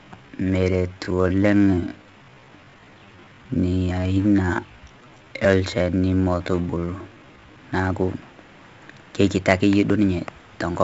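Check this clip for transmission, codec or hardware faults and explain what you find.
Two faults are audible, one across the whole recording and one over its first part.

From 0 to 7.58 s the speech is a time-stretched section, slowed to about 0.62 times normal pace with the pitch held. It drags, with syllables drawn out. The likely cause is software repeating short pieces to lengthen the audio, and the pace jumps back to normal after 7.58 s.

Throughout, there is heavy 4-bit ADPCM compression. A gritty hiss rides on every loud passage and rises and falls with the level, and sharp attacks distort. This comes from coarse 4-bit prediction steps adapting too slowly, which fits about 64 kbps. Nothing is present above 8 kHz, which dulls the sound.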